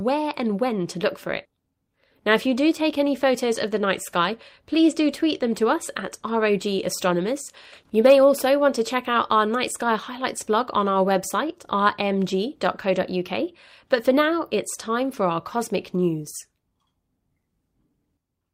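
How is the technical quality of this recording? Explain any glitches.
Nothing in the recording stood out as a technical problem on listening, and there are no glitches to explain.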